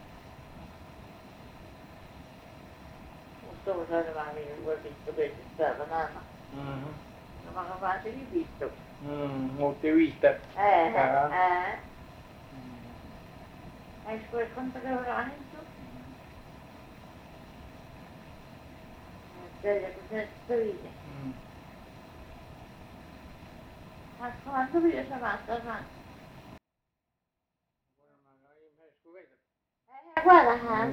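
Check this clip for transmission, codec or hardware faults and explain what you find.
One fault is present, near the end of the clip.

One channel inverted, from 26.58 to 30.17 s: the level drops by about 36 dB, and what remains sounds faint. This is likely caused by one stereo channel arriving with reversed polarity, so that when the two sides are combined to mono, everything common to both cancels. Centred material and low end all but disappear, leaving only the small differences between left and right.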